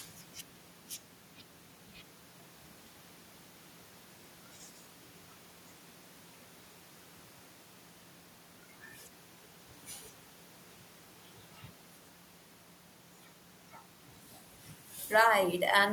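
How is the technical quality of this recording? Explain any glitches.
Nothing goes wrong technically anywhere in this recording.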